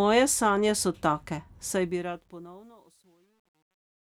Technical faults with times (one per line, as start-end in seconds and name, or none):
1.67-4.18 truncation distortion on a fade